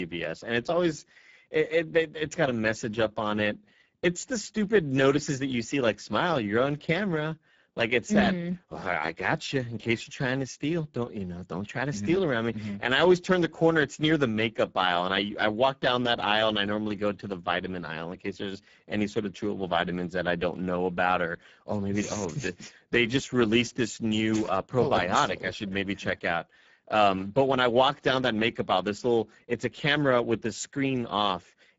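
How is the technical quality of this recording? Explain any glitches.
The recording has one fault: Speex codec damage, plainly audible for the whole clip. The speech comes through noisy and hoarse, which fits a low Speex setting of roughly 10 kbps. That leaves the CELP coder few bits for the excitation signal. Nothing reaches above 7.7 kHz, and the upper band sounds like shaped noise rather than real detail.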